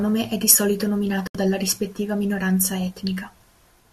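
At 1.27 s, just after "è di solito", the speech cuts out in a digital broadcast dropout: the receiver muted on failed frames, losing roughly 72 ms, consistent with a few dropped frames, before resuming at "dalla rispettiva minoranza". The waveform shows a flat gap and the spectrogram a blank vertical band until 1.35 s.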